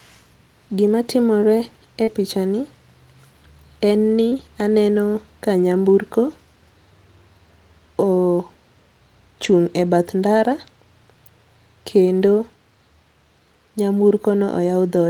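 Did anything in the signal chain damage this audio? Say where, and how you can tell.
Yes, the damage happens in transmission: packets were lost on the network and repaired at the decoder in two different ways.

Lost packets rebuilt from error correction occur at 0.87 s, 2.07 to 2.09 s, 4.31 to 4.33 s, 9.43 to 9.53 s and 12.21 to 12.27 s. The sound never drops out, but each patch turns briefly grainier and noisier. Each missing packet was replaced by the low-bitrate duplicate carried in the next one. Single packets give 20 ms patches, the 9.43 s event covers three packets (60 ms) and the 12.21 s event covers two (40 ms).

Short concealed packet loss appears at 2.03 to 2.09 s and at 4.29 to 4.33 s as a short smear or wobble rather than a clean gap. No backup copy existed for the start of each hole, so the decoder extended the preceding sound for about 38 ms and 22 ms respectively. The final 20 ms of each hole was then covered by the error-correction copy before the real audio took over again.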